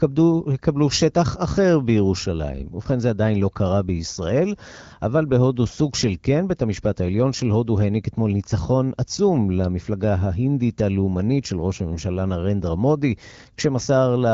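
A speech recording with no technical faults to report. It carries the marks of the AMR wideband (HD Voice) codec running at 12.65 kbit/s: the audio stops near 7 kHz, the band from about 6.4 to 7 kHz is filled with shaped noise, and the coding damage is light.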